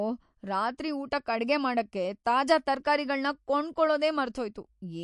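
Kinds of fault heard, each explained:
MP3 compression: runs through the whole speech clip with plainly audible damage, a watery, swirly texture and smeared attacks, likely from a low bitrate around 48 kbps.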